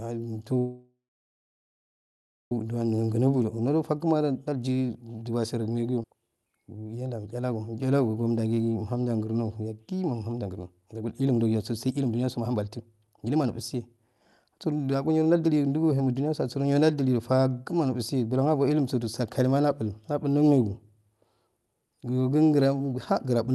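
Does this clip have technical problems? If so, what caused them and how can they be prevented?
Yes. The speech went through a call path using Opus, with content limited to about 12 kHz, and three kinds of fault occur.

Call audio freeze, 0.58 to 2.52 s: packets were likely delayed and the jitter buffer ran dry. The last sound is stretched, then falls silent for about 1.5 s before the speech resumes without any loss. Prevention: use a larger adaptive jitter buffer and a steadier network route.

Jitter buffer speed-up, 3.03 to 5.21 s, 6.29 to 7.53 s and 10.42 to 16.42 s: the buffer was overfilled, so it trimmed repeated pitch-period slices. Speech runs 10%, 11% and 19% faster at unchanged pitch, hurried most in the last stretch, where about a second is removed. Prevention: limit how quickly the buffer drains excess delay, spreading the catch-up more gently.

Skip ahead at 6.03 s: a stretch of audio was dropped while later audio was already queued. 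Playback jumps forward almost seamlessly, losing roughly 0.4 s of speech. Prevention: let the buffer grow briefly instead of dropping audio when bursts arrive.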